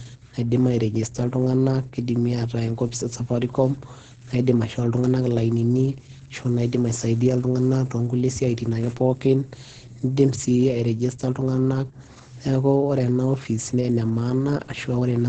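Opus voice compression runs throughout this speech clip. The sound is muffled, hoarse and slightly robotic, with nothing above 9.2 kHz. That fits the SILK linear-prediction coder at a wideband setting and a rate near 10 kb/s, coding the excitation too coarsely and discarding the upper band.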